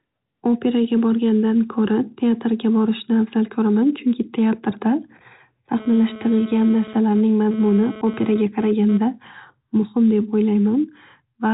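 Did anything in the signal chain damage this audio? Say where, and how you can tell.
Yes. GSM phone buzz enters at the analogue wiring stage, from 5.78 s to 8.98 s. A hard, raspy buzz at about 217 Hz sits over the speech, with a dense stack of harmonics. It runs about 18 dB below the signal. It pulses on and off rather than holding steady, which points to a nearby 2G phone moving data. Its bursts of radio energy are rectified in the audio circuit and turned into that buzz.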